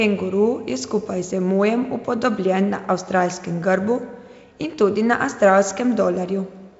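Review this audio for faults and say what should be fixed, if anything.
No faults turned up in this review, so nothing needs to be fixed.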